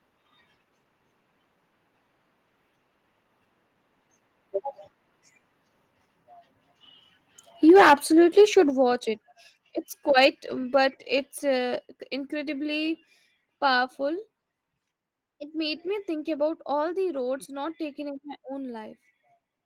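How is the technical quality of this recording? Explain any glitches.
The recording has two related glitches in a short stretch of the speech, both pointing to a microphone input set too high and then corrected on the fly.

From 7.69 to 7.94 s there is microphone overload. The input was likely driven about 6 dB past the converter's ceiling, so the loudest peaks were flattened at the converter's limit, with around a tenth of the samples in that window clipped. You hear this as a harsh, crackly edge on those syllables, a gritty distortion rather than a clean rise in loudness.

During and right after this, the microphone volume stepped down twice. At 7.7 s the input level likely dropped by about 2 dB, and at 8.7 s by about a further 6 dB, consistent with call software reacting to the clipping by lowering the device gain. Each step is an abrupt fall in level, with voice and background quieter together.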